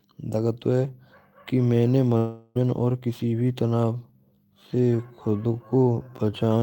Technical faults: long network dropout; time-stretched section

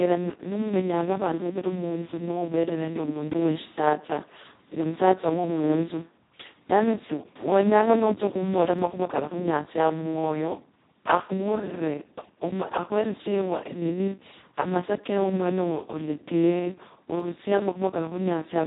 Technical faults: Speex codec; dropped samples

